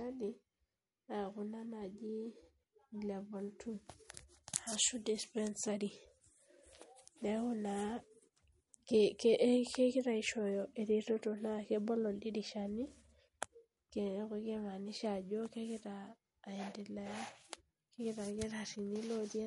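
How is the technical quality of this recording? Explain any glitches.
Technical quality is limited by clearly audible lossy coding that runs through the whole recording.

MP3 compression, likely the cause, affects the speech from start to finish. Nothing remains above 11.2 kHz, so sibilants lose their sharpness, and weak spectral detail flickers in and out between frames, leaving a watery, swirly texture with metallic chirps on s sounds. The extent of damage points to a low bitrate, around 46 kbps. On a spectrogram this shows as a flat ceiling at 11.2 kHz with patchy, blocky holes below it; the waveform looks unremarkable.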